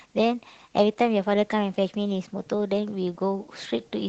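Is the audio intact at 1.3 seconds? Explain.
No. At 1.3 seconds, as across the whole clip, the speech passes through Opus voice compression in hybrid mode, which fits a bitrate around 16 kbps. The linear-prediction layer codes the excitation coarsely while a thin upper layer covers the top band, leaving the speech plainly muffled, hoarse and slightly robotic.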